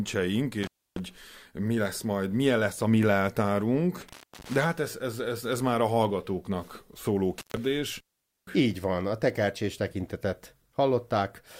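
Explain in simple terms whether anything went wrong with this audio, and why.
An intermittent contact, probably a loose cable or plug, makes the speech cut out with crackly edges at 0.63, 4.01 and 7.38 seconds, lasting roughly 0.3, 0.3 and 0.1 seconds.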